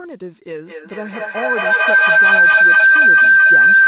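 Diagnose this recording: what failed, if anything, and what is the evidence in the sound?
Feedback howl in the call's acoustic loop: from 0.65 s, a tone near 1.5 kHz swells to about 17 dB over speech, pulsing every fifth of a second, unlike steady hum.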